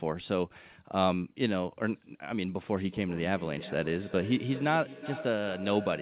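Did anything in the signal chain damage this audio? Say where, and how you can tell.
Yes. The damage is a feedback echo between two devices, at the call-processing stage. From 2.76 s to the end, a second device in the same room plays the call back into the microphone. The microphone's echo canceller only removes its own device's playback, so this sound is sent again. Each sound returns at a fixed interval of roughly 0.4 s, peaking about 14 dB below the direct speech. The whole clip is band-limited to 4 kHz, which fits a narrowband G.711 call codec.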